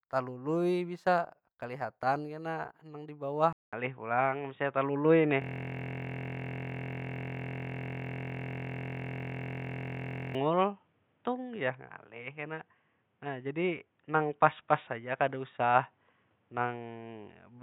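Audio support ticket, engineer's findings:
Input switched to a poorer device, 3.53 s to end, just after "nang di". About 200 ms of silence at the switch, then the sound turns dull and boxy. Nothing above 3.8 kHz, level changes about 5 dB, and a new noise floor sits about 45 dB below the signal. Likely cause: the capture moved to another microphone or a headset call profile. On a spectrogram there is a brief blank gap, then a hard horizontal ceiling at 3.8 kHz with a new noise floor below it.

System hang loop, 5.42 s to 10.35 s. A 23.22 ms slice of audio repeats exactly, which heard at 43.1 Hz gives a steady buzz in place of the sound. The loop length fits a 1024-sample buffer. The probable component is the driver or host, which froze while the hardware kept replaying the same ring buffer. The waveform shows one identical short segment tiled for about 5 s. On a spectrogram this appears as evenly spaced harmonic lines at multiples of 43.1 Hz, below the 3.8 kHz ceiling.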